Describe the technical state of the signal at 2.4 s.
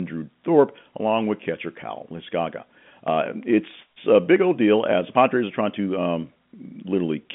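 At 2.4 s the audio is intact, carried cleanly on its G.711 telephone coding with nothing heard above about 3.7 kHz, as a telephone line allows.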